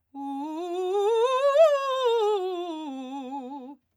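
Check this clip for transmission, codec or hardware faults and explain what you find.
No faults turn up anywhere in the music; the signal stays continuous and intact throughout.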